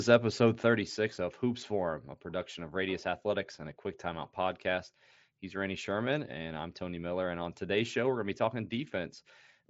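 Nothing's wrong technically with this speech clip; the sound just tops out around 7.7 kHz, which is what you'd expect from a Bluetooth headset running the mSBC wideband codec.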